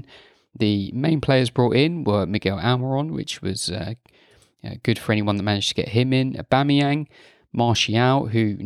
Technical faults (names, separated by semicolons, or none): none